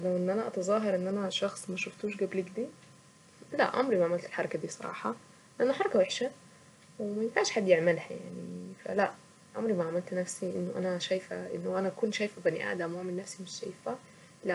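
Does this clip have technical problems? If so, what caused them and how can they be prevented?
No, the signal shows no technical faults anywhere in the recording, so there is nothing here to trace to a cause or guard against.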